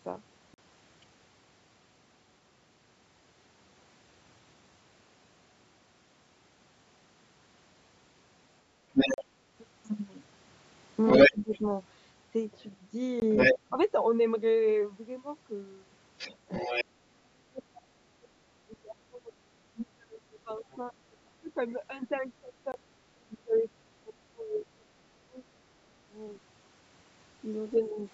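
A speech recording from a call, band-limited by the call microphone processing so that nothing reaches above 8 kHz. Four blocks of digital silence occur, at 0.54–0.58 s and 9.14–9.18 s (40 ms each) and at 13.20–13.22 s and 22.72–22.74 s (20 ms each). At each one the signal drops straight to silence and returns with no fade, and the longer gaps register as brief holes. From 8.93 to 23.62 s the other side's voice leaking through is prominent, at roughly the talker's level or slightly above. A faint return at 27.75–27.88 s sits around 30 dB below the speech. This is likely residual loudspeaker echo the echo canceller failed to remove from the microphone path. Between 11.31 and 28.06 s the speech is suppressed in double talk. Across roughly 7 seconds in total the talker's level dips, by up to about 30 dB, whenever the far end is active, likely because the canceller attenuated both signals when it could not separate them.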